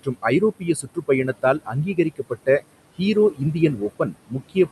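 Noise suppressor artifacts run through the whole clip: steady room noise is pulled down by about 21 dB between phrases, so the background sinks between words and rises under them. The suppressor also cuts speech, mistaking parts of it for noise, at 0.03–0.25, 0.59–1.09, 1.27–2.64, 3.31–3.55 and from 3.76 s to the end, with dips of about 17 to 20 dB that leave soft sounds swallowed.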